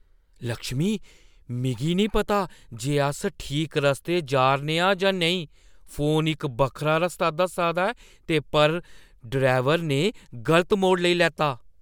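No technical faults can be heard in this recording.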